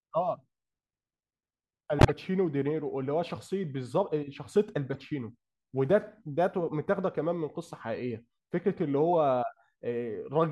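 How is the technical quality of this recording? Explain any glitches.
The recording is marred by three corrupt frame decoded glitches, at 1.99 to 2.11 s, 4.93 to 5.00 s and 9.13 s. Damaged compressed frames were decoded anyway, misplacing energy in frequency. The result is brief chirpy noise bursts over the speech, loudest at 2 s, near -10 dBFS.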